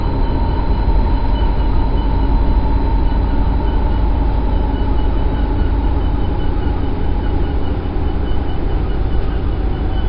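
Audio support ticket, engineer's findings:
Wrong sample rate, whole clip, 0 to 10 s. Sound runs at one third speed and sits 19 semitones low. Everything is dragged out and dark. Speed and pitch drop together, so no time-stretch is involved. Probable component is the playback clock or the stream header. The ratio fits 48 kHz material played out at 16 kHz without resampling.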